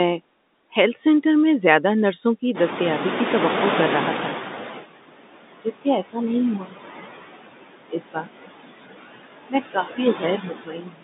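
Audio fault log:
Throughout: noise suppressor artifacts. The suppressor pulls down whatever bands it judges to be steady noise, frame by frame, by about 19 dB at its deepest, so the background drops away between phrases and swells back under the talking. That sits on top of a telephone-band line that tops out near 3.8 kHz, which fits G.711 A-law.
2.54 to 4.83 s: noise suppressor catching up. Right after "میں زیادہ نرسوں کی" the room noise jumps by about 16 dB, ending up only about 8 dB under the speech. The suppressor's noise estimate lags behind that step, so for roughly 2.3 seconds the louder background leaks through with less reduction. It then sinks by about 15 dB as the estimate adapts, which you hear as a slow fade of the background noise.
5.56, 6.6 to 6.74, 7.89 to 8.5, 9.73 to 9.99 and 10.15 s to the end: speech cut by the noise suppressor. Here the suppressor mistakes bits of speech for noise and turns them down along with the background. 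The drops are about 22, 13, 21, 15 and 18 dB respectively. The short ones clip a tenth of a second or so, while the 7.89 and closing stretches lose a good chunk, so endings and soft sounds come across swallowed and faint.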